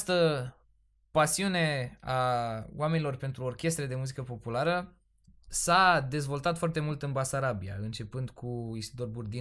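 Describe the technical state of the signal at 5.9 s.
At 5.9 s the speech signal is intact, with no audible fault at that moment.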